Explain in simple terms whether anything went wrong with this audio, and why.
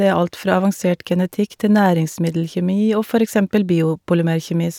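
Nothing went wrong with this recording: the speech comes through steadily from beginning to end, with no technical faults to be heard anywhere in it.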